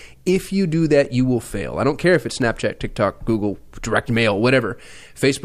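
From 1.05 s, just after "you do", a click recurs every 1.36 s until about 5.1 s, likely clock drift buffer slips, each dropping or repeating a short block of samples.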